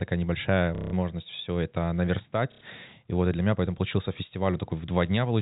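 Speech over a telephone-band G.711 line, with packet loss and the last packet repeated at 0.75 to 0.93 s and 2.52 to 2.61 s, giving robotic stutters that buzz at a rate fitting 30 ms packets.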